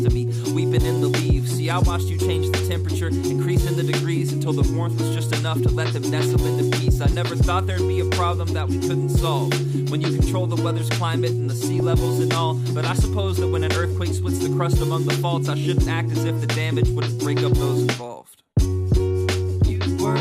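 DAB burbling at 11.8 s and again from 14.26 to 14.38 s: weak reception lets a small fraction of bits slip past error correction, corrupting samples across several frames, giving short blips of noise in single sub-bands over the sound.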